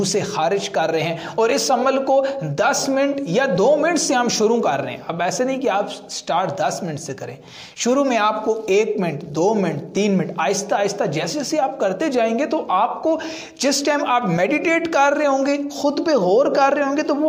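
No technical faults are audible.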